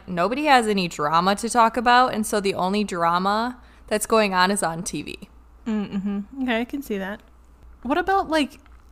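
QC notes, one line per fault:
No faults heard on the speech; nothing to flag.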